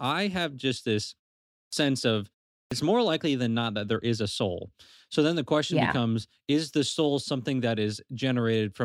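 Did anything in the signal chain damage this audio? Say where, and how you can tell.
Yes: clipped starts after a pause at 1.66 s and 2.65 s, about 65 ms lost each, consistent with the playback device sleeping and relocking after 0.54 s and 0.39 s silences.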